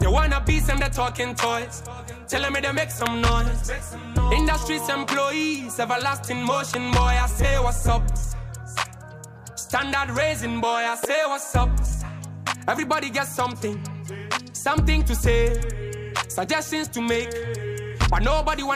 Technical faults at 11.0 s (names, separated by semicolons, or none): electrical switching spike